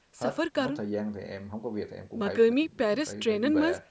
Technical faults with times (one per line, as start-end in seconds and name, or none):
none